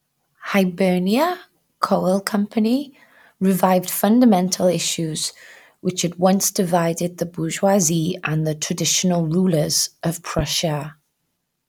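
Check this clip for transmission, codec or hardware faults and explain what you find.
One fault is present, a loud pop from 10.39 to 10.43 s. A sudden voltage step, likely from a plug, switch or static discharge, entered the signal path and was shaped by the circuitry after it. The result is a single sharp pop roughly 10 dB above the speech, which carries on underneath.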